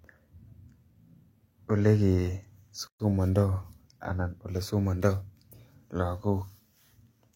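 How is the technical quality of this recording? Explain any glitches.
The speech has one clear glitch. At 2.88 to 3.00 s there is a gap at a join of encoded pieces. The recording was encoded in separate segments, apparently about 4 s long, and joined without trimming, so one segment's padded final frame and the next segment's start-up delay both remain. In the sound, this opens a silence of about 122 ms in the middle of continuous speech. Its edges are smeared by the codec, and the speech resumes exactly where it stopped.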